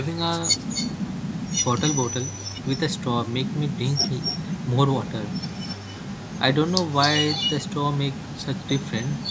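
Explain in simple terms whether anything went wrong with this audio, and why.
An echo leak replays the speech a quarter second late at 0.59–3.01, 3.44–4.67, 5.04–6.39 and 6.85 s onward, likely from a loudspeaker's echo canceller missing it.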